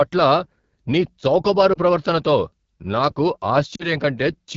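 Speech coded with the AMR wideband (HD Voice) codec throughout, at one of its lowest rates. The roughness points to about 8.85 kbit/s. At that rate the model that codes the band up to 6.4 kHz has too few bits to shape the pulses driving the vocal tract filter, so the voice comes across raspy and gritty. The top band, 6.4 to 7 kHz, is filled with shaped noise. Lost AMR speech frames show up twice. From 1.73 to 1.78 s, between "నీ చౌకబారు" and "ప్రవర్తనతో నాకు", there is a brief dip or warble, which fits a single 20 ms frame failing its checksum and being replaced by the decoder's reuse of the previous pitch and filter settings. From 3.75 to 3.90 s, just after "నీ చౌకబారు ప్రవర్తనతో నాకు", the sound drops to near silence for longer, consistent with about two consecutive frames concealed with falling gain, and then returns rough for a moment.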